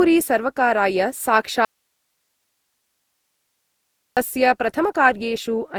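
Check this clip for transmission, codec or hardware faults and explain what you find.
Two problems stand out in this speech: the whole clip has a smeared, repeatedly coded sound, and a long stretch in the middle drops out to hiss.

Generation loss runs throughout. The speech sounds swirly and hollow, with soft, blurred consonant attacks, worse than a single 64 kbit/s Opus pass would give. It's likely been through Opus around seven times, each re-encode quantising on a shifted frame grid and stacking its damage.

Audio dropout to a faint residue runs from 1.65 s to 4.17 s. The speech cuts off abruptly for about 2.5 s and comes back just as suddenly, with only hiss around 55 dB below the speech in the gap. That's likely the signal being lost upstream while the rest of the chain stayed live.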